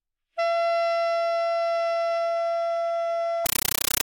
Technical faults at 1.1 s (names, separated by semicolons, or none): none